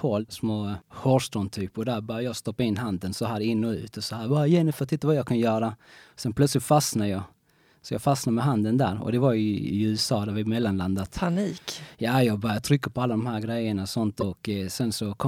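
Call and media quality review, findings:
Short glitch at 14.17–14.23 s, right after "här grejerna och sånt". About 56 ms long. Damaged data in a compressed stream. Corrupt bytes in the encoded speech. The decoder misreads those frames, loses sync, then locks onto the next frame header.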